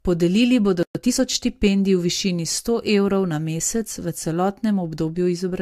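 Throughout the speech, nothing is present above about 15.2 kHz, and two layers of lossy smearing sit on top of each other. This points to transcoding between lossy codecs, likely AAC then Vorbis. The spectrogram shows a hard ceiling with blurred, patchy high bands.

At 0.83 s the sound stops dead for 120 ms until 0.95 s. This is a playback stall, likely from the player running out of data. The waveform shows a flat gap.

From 0.95 to 1.19 s, time-compressed catch-up plays the backlog at 1.5 times speed with unchanged pitch. Spectrogram features look compressed horizontally there.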